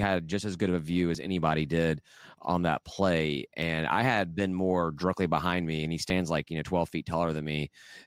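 At 1.15, 3.62 and 6.10 s the speech skips forward abruptly, each time dropping roughly 20 ms. The regular spacing of about 2.5 s points to audio missing between chunks, likely because the recorder loses a sliver while switching from one block to the next. On a waveform each skip shows as a sudden discontinuity with no silent gap, and on a spectrogram as a thin vertical broadband line where the contours jump.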